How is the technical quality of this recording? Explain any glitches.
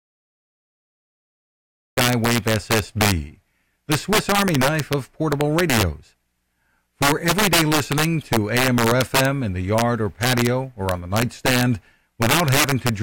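The technical quality is poor: the recording has two clear faults, a late start and wrap-around distortion on loud peaks throughout the speech.

Cut-off start: the file holds digital silence until 1.97 s, where the speech begins abruptly mid-sound with no attack or fade. The waveform is a flat line that jumps straight to signal, and the spectrogram shows a hard vertical edge at that instant.

Integer overflow: throughout, the gain overshoots the integer limit by about 8 dB, so peaks wrap to the opposite sign instead of being limited. A small share of samples, around one or two percent, flip, causing violent cracks on louder syllables. The waveform shows spikes jumping abruptly to the opposite sign, and the spectrogram shows broadband vertical streaks.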